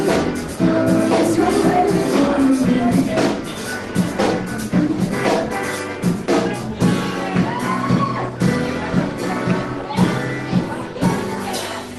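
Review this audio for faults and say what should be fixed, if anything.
Nothing stood out on listening that would need fixing.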